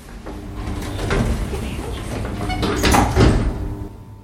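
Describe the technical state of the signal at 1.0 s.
At 1.0 s the signal is intact, with no audible fault at that moment.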